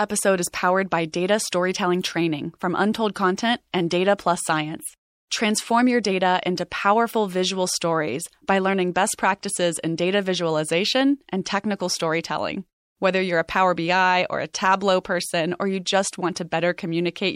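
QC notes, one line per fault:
Throughout: MP3 compression artefacts are plainly audible across the speech, likely from encoding at a low bitrate, with the damage fitting something around 64 kbps. With that few bits, the encoder discards weak frequency lines that drop in and out between frames, which gives the sound a watery, swirling texture and softens the sharpness of attacks.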